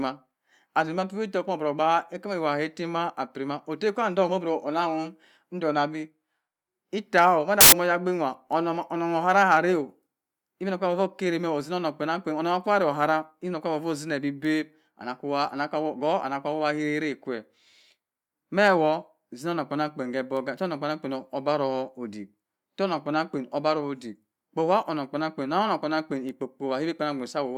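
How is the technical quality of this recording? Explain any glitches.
The recording has one clear glitch, a short burst of noise in the speech.

Samples built from the wrong bytes, from 7.61 to 7.72 s: for roughly 0.12 s the playback misreads how each sample's bytes fit together, so the rapidly fluctuating low-order bits end up as the dominant part of every value. The speech is replaced by loud, harsh broadband noise, before the sound snaps back to normal.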